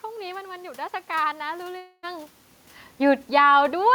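From 1.77 to 2.05 s the sound is replaced by a buzzy continuation of the last moment that fades out over roughly a quarter second, then speech resumes with about 0.26 s missing. This is likely a long network dropout, with the receiver concealing the lost stretch. The talker also shifts relative to the microphone around 2.0 s, changing the level.

At 3.22 s automatic gain falling sets in. The gain control pulls its level down by about 4 dB through 3.53 s, so the speech and the room noise behind it sink together.

Overlapping this, automatic gain rising runs from 3.44 to 3.85 s. The input had dropped by about 13 dB, and the control responds by raising its gain about 4 dB, making voice and background swell back up together.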